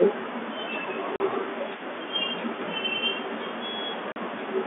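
From the start to the end at 4.66 s, a faint copy of the speech trails about 280 ms behind, roughly 30 dB down. That's an echo leak, likely a speakerphone whose echo canceller let some through. At 1.16 s and again at 4.12 s there's packet loss filled with silence: 40 ms holes with hard edges, which fits two 20 ms packets each time. The band sits within the usual G.711 telephone coding limits.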